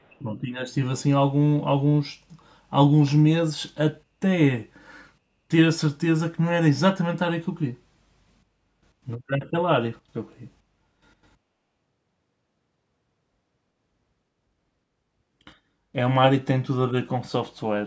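From 0.00 to 0.21 s, a very faint delayed copy of the speech arrives about 318 ms late, likely an echo leak through an incompletely cancelled far-end loudspeaker path.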